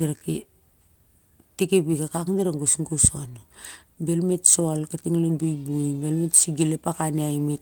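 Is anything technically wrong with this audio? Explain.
No, nothing technically wrong turns up here; the speech comes through Opus voice compression at 24 kbps in its hybrid mode at full bandwidth, with only light coding effects to be heard.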